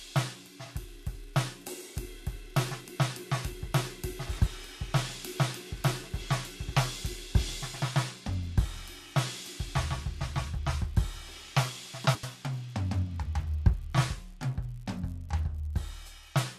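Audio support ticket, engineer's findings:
Garbled flutter in the music, 4.29–4.48 s and again 12.06–12.24 s. Each stretch plays with its two halves swapped, roughly 85 ms apiece, which fits four-frame blocks. Frames out of order: two adjacent frame runs delivered reversed and decoded as received, likely at the jitter buffer or packet reordering stage. No time lost, so timing after each event stays intact.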